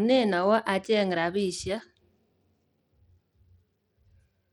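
A speech clip degraded throughout, with dull, flickering treble and gritty noise, likely Bluetooth SBC compression, consistent with a starved bit pool near 96 kbps.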